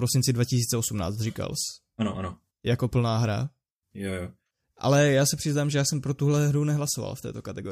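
At 1.53 s there is a bit error spike. A single sample jumps by a power of two and snaps straight back, reaching about -33 dBFS. It sounds like one sharp, broadband tick. The tick has no relation to the surrounding speech.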